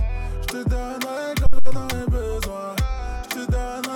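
A phantom power switch on a live input at 1.46 s sends a sudden voltage step through the coupling capacitors into the signal path. This phantom power thump is a deep, low thud peaking at about -4 dBFS, decaying over 91 ms, with the disturbance ending by 1.86 s.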